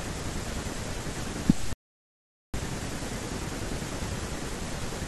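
Digital broadcast dropout, 1.73 to 2.59 s: the receiver stopped getting valid frames, through signal loss or failed checksums, and muted until good data returned. The speech cuts or quickly fades to silence, and the 0.81 s of programme sent during the gap is lost.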